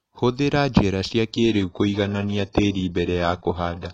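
At 1.31 s the speech abruptly switches to an adaptive stream at a lower bitrate and stays there to the end. Without any gap, the treble turns thin and synthetic and codec smearing rises, which fits a fall from a 96 kbit/s AAC-LC stream to roughly 12 kbit/s HE-AAC.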